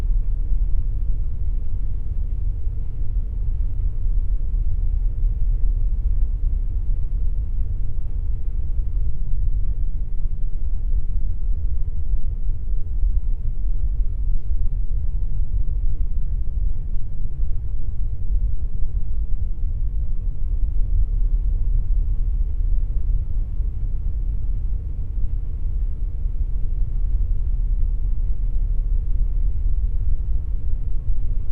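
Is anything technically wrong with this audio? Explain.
Yes. From 9.05 to 20.47 s there is a time-stretched section: the pace abruptly drops to about 0.74 times normal speed while pitch stays unchanged, so the sound drags. The likely cause is software lengthening the passage by repeating short pieces to preserve pitch.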